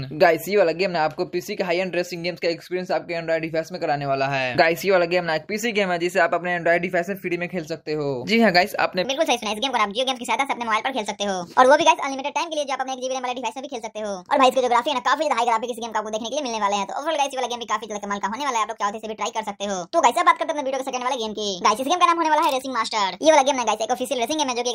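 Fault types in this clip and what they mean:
Section at the wrong speed: From 9.05 s to the end, playback runs 1.43 times too fast, pitch rising roughly seven semitones. Likely a clock mismatch.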